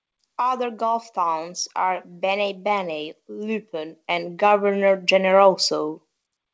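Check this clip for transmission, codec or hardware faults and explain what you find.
One fault is audible, and it comes from the gain stage rather than the transmission path. From 0.37 s to 5.99 s there is automatic gain rising. The gain control judged the input too quiet and kept turning it up. Over those five and a half seconds the level climbs by about 11 dB. Speech and background swell together. The band stops at 8 kHz, which fits a G.722 call path.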